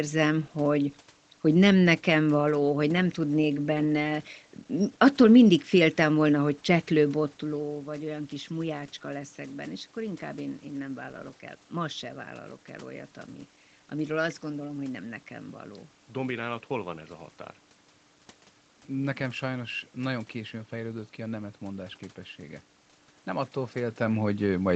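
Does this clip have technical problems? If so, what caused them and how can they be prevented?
No, nothing here indicates a technical fault; the level shifts around 7 s and 23.5 s are the talker moving relative to the microphone, so there is nothing to prevent.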